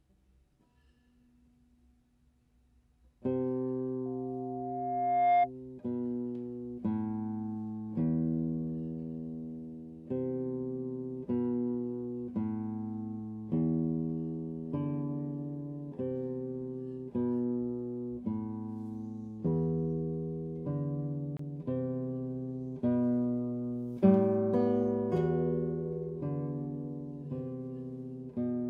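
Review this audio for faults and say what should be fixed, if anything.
A loudspeaker feedback squeal runs from 4.05 to 5.50 s. A single tone at 708 Hz swells over roughly a second and a half until it sits around 10 dB above the program material. The microphone was picking up the loudspeaker it fed, and at 708 Hz the loop gain exceeded one, so that frequency grew on its own. To prevent it, reduce monitor gain, move the microphone out of the speaker's coverage, or notch 708 Hz in the feed.

A CD skip occurs from 21.37 to 21.39 s. Playback drops out in a very short mute, a few tens of milliseconds, heard as a tick, and resumes from a different point in the material. A knock or a disc flaw made the laser jump to another turn of the spiral, so the player muted briefly and continued from the new position. To prevent it, clean or replace the disc, isolate the player from vibration, or re-rip with error-checking software.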